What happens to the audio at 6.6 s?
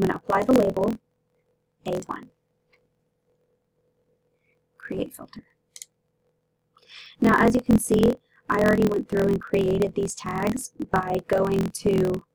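At 6.6 s, as throughout the clip, a block size mismatch (truncated) is present: one stage writes longer blocks than the next reads, which fits a 1024-sample read, so each block's tail is discarded. This leaves a 43.1 Hz buzz and audio running 1.12 times fast at roughly normal pitch.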